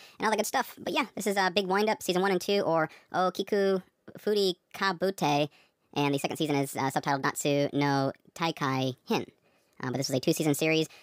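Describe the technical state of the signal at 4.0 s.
At 4.0 s the speech has a wrong sample rate, as it does across the whole clip. It runs about 1.38 times too fast and sits 5.55 semitones high. Speed and pitch rise together, which fits 32 kHz material played back at 44.1 kHz without conversion. Voices sound hurried and chipmunk-like.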